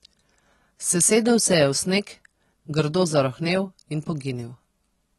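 From start to finish the speech sounds dull and smeared, with a warbling, fizzy edge on sibilants and held sounds and nothing above 12 kHz. The cause is likely AAC compression, AAC-LC at a rate fitting about 32 kbps, which strips and approximates high-frequency detail.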